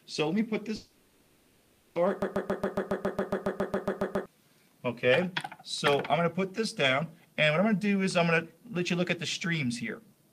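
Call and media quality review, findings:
Long network dropout, 0.75 to 1.97 s: about 1.2 s of audio never arrives. The last sound is smeared into a fading buzz, likely receiver-side concealment covering lost packets. Audio resumes with that chunk gone.

Broken-record loop, 2.22 to 4.26 s: a 138 ms fragment repeats back to back, 15 times. Sounds like a stalled player or stream re-sending its last held buffer, likely a decoder hang. The real audio for those two seconds is lost.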